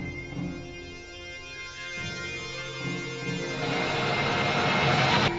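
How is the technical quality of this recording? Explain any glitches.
Nothing in the recording stands out as a glitch, so there's nothing here that needs explaining.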